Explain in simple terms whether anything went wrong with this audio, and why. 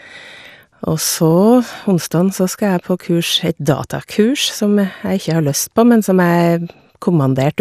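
Something did go wrong: the speech sounds dull and muffled from start to finish, with a gurgly, grainy edge. That's most likely MP2 compression run too lean, so the top frequencies get dropped and flicker, and what's left is coarsely rounded off.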